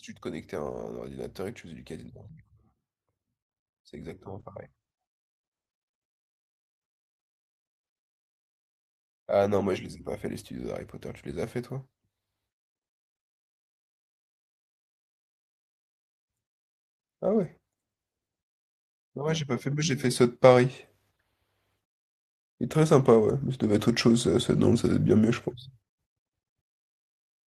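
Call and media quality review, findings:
Automatic gain rising, 9.38–11.6 s: speech and background noise swell together by about 3 dB over roughly two seconds. Probable component: capture-side AGC reading the input as too quiet and ramping its gain up gradually.

Automatic gain rising, 19.15–24.76 s: larger, longer swell of about 11 dB across 5.6 s, with the noise floor lifting along with the speech. Same AGC stage; the gain climbs steadily rather than stepping.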